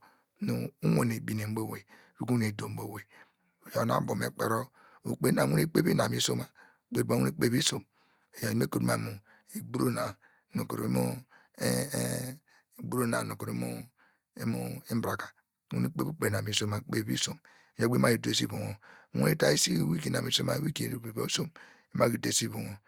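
No technical faults can be heard in the speech at any point in the recording.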